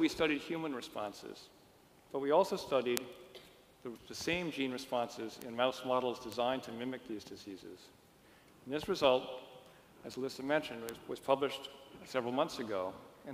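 Bit error spikes occur at 2.97, 5.42, 6.32 and 10.89 s. In each, a single flipped bit in a stored or transmitted sample makes its value leap by a power of two and snap straight back. This yields one sharp, broadband tick that has nothing to do with the surrounding sound. The loudest, at 2.97 s, peaks near about -7 dBFS and appears to span two adjacent samples. The others reach about -19, -19 and -13 dBFS respectively.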